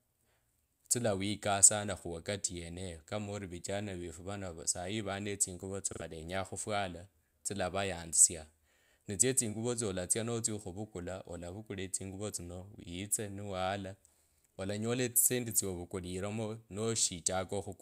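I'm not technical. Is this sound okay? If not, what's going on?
No. Around 5.93 to 6.02 seconds there's a repeated buffer: fresh audio arrived late, so the device replayed its last short chunk twice more, creating a brief stutter in the speech.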